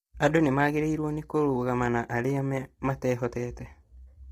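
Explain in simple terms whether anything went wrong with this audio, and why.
Low-delay AAC compression runs through the whole clip, from the first moment to the last. The speech sounds rough and grainy, with a hiss-like fuzz filling the gaps between the tones of the voice and a thin, artificial-sounding top end. The likely cause is the kind of fast, low-delay coding used on video calls. It chops sound into very short slices, so it can't capture the voice's pitch cleanly, and with little data to spare the detail gets smeared into noise.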